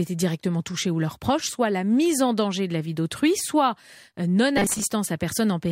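From 4.57 to 4.87 s, after "vie d'autrui soit euh", the speech turns into a rigid 200 Hz metallic buzz. This is robotic sound from repeated short buffers, likely a 5 ms chunk looped while about half the audio is skipped. A spectrogram shows flat, evenly spaced harmonics, and the waveform shows identical repeating cycles.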